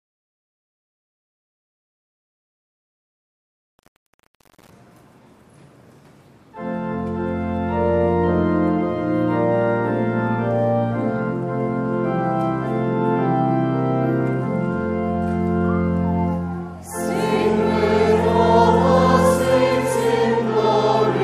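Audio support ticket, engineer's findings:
Truncation distortion on fade, 0.00–4.70 s. Quiet end gritty. Probable cause: undithered gain/fade stage, which fits 7-bit resolution. Waveform shows square staircase steps; spectrogram shows broadband grit.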